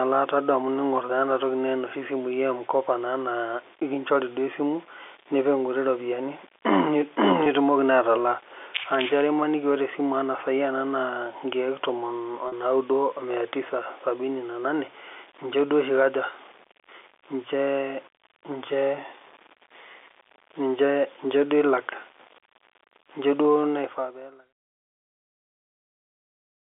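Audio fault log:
throughout, low bit depth without dither: A grainy, gritty roughness clings to the sound and changes with it, most obvious in quiet passages and decays, where it turns coarse. It rides on top of the telephone-band character, which itself stays clean. The likely cause is a signal rounded to very few levels with no dither, which fits an 8-bit word. The error tracks the waveform instead of spreading as steady hiss, and it sits roughly 30 dB below the level.
7.44 and 12.48 to 12.52, packet loss with pitch repetition: At both points the sound briefly holds and turns buzzy, as if one tone were stretched in place, for about 20 ms at 7.44 and about 40 ms at 12.48. The gaps fit one lost packet and then two. The receiver filled each gap by repeating the last pitch period, and that looped cycle is the buzz. Both gaps are shorter than the repair's fade-out, so neither drops to silence.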